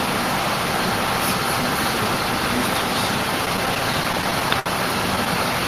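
Between 3.45 and 4.68 s the sound hits repeated stalls (stutter): twelve brief holds, the longest 62 ms, where late packets empty the jitter buffer and the last sound is stretched or faded. Unlike dropouts, nothing is lost; roughly 175 ms is added, so it drags.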